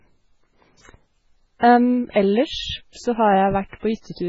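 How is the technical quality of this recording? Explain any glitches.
The technical quality is poor. Heavy compression damage runs through the whole recording, and three short pre-echo glitches occur from about 2.1 s onward.

MP3 compression, likely the cause, affects the entire clip. There is no content above about 7.6 kHz, so the speech sounds dull and band-limited. The texture is watery and swirly, with fricatives breaking into metallic chirps. This points to an encoder starved of bits, consistent with a very low bitrate around 16 kbps. To save data it cuts the treble at a fixed frequency and drops weak spectral lines, which then flicker on and off from frame to frame.

Pre-echo occurs at 2.10 to 2.16 s (about 52 ms), at 2.92 to 2.95 s just before "p så" (about 35 ms), and at 3.79 to 3.83 s (about 33 ms). Each time, a short hiss leads into a sharp speech onset, and the onset itself sounds softened. 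The codec spreads quantisation noise across a whole transform block. When a loud attack sits late in that block, the noise sized for it leaks into the quiet moment before it.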